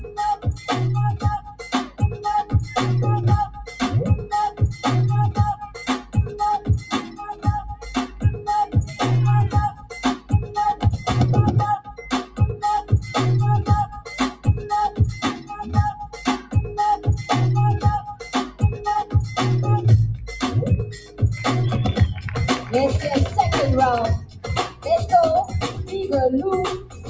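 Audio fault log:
Throughout: noise suppressor applied to music or sounds. A speech-tuned suppressor treats steady material as noise, so level swings by around 10 dB and the sound pumps and thins.
0.0–12.9 s, 13.9–14.5 s, 15.4–16.5 s, 18.1–19.1 s, 20.2–21.2 s, 22.1–27.1 s: sound cut by the noise suppressor. Held and decaying parts sink by about 10 to 15 dB while attacks slip through, and the top stays within the call band's 8 kHz ceiling.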